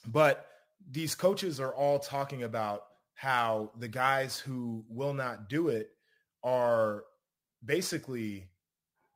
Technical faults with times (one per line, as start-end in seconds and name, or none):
none